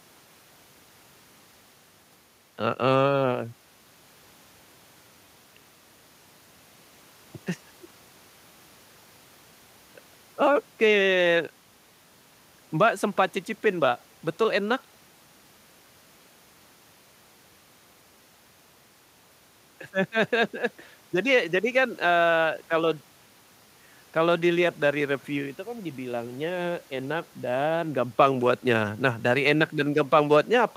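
No faults can be heard anywhere in this speech recording.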